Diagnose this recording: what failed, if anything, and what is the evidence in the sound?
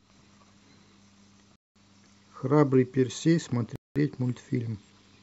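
The fault is a gap between chunks, at the playback or chunked-delivery stage. The speech stops dead at 1.56 s and again at 3.76 s. Each hole lasts 200 ms, ending at 1.76 s and 3.96 s. The edges are hard, and the holes repeat every 2.2 s. That spacing points to 2-second chunks with 200 ms of silence added at each join. Nothing is lost. The speech simply resumes where it stopped.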